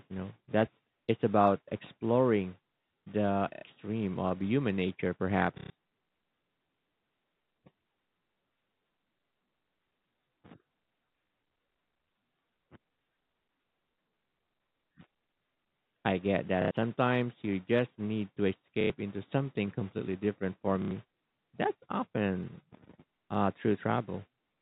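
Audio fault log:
3.54, 5.58, 16.62, 18.81 and 20.82 s: packet loss with last packet repeated. Each gap lasts 90 ms, or 120 ms at 5.58 s, which fits 30 ms packets. The replayed packet buzzes near 33 Hz, a short robotic stutter.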